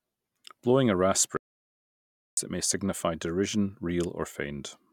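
An audio dropout to silence runs from 1.37 s to 2.37 s, cutting the speech off mid-flow and bringing it back just as abruptly about a second later. The gap is silent, with no room tone or background hiss, which likely means the input signal was lost, through a disconnection, a failed link or a mute, while recording carried on writing silence. Whatever was said during that second is gone.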